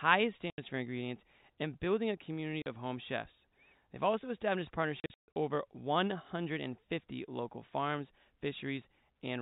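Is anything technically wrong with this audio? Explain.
Yes, there is packet loss filled with silence. Packets were lost in transit and the receiver played silence in their place. This cuts hard-edged holes at 0.50 to 0.58 s, just before "for ingredients and building", and at 2.62 to 2.66 s, between "and building a community" and "of home chefs". Between 5.00 and 5.36 s, after "also established", the sound is chopped into several gaps totalling 260 ms, the longest 140 ms. All gaps are multiples of 20 ms, which fits 20 ms packets. The telephone-band G.711 coding itself is working as intended.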